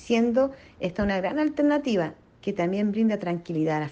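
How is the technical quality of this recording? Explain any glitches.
Nothing here trips the ear: no glitches, dropouts or odd artefacts anywhere in the recording.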